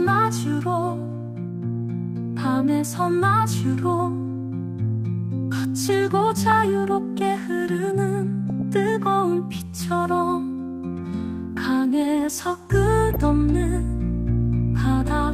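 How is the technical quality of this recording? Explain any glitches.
The recording has three short bursts of DAB burbling, at 6.50 to 6.52 s, 8.50 to 8.62 s, and 13.13 to 13.16 s. Each burst is brief. Weak reception lets a small fraction of bits, around 0.15 to 0.2 percent, slip past error correction into the MP2 stream. Corrupted samples put short noise blips in single sub-bands, and corrupted scale factors make sub-bands jump in level for up to a frame. The longest burst is the one near 8.5 s.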